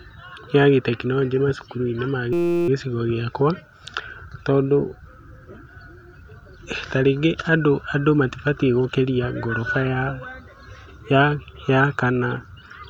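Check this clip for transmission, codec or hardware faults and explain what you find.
There is one fault. From 2.33 s to 2.68 s the speech gives way to a steady, flat buzz pitched at about 172 Hz that holds for roughly a third of a second. This is a system hang loop: while the computer or driver stalled, the sound hardware kept replaying the same 5.8 ms slice, which fits a 256-sample buffer, about sixty times. The repeat rate is what sets the buzz's pitch. Almost no audio appears to be lost around it.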